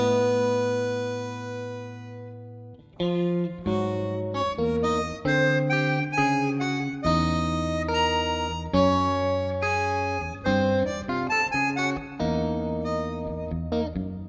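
No technical faults are audible.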